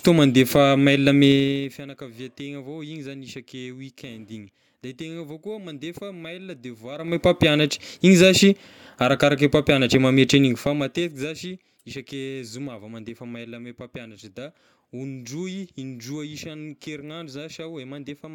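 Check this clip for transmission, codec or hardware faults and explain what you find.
Zipper noise appears twice. From 1.28 to 1.8 s, just after "mandefa mail", the gain drops about 20 dB, and from 6.92 to 7.24 s it rises by a similar amount. In both cases it moves in unsmoothed 2 dB jumps, roughly thirty per second, and each jump clicks, giving a rapid ticking over the sound.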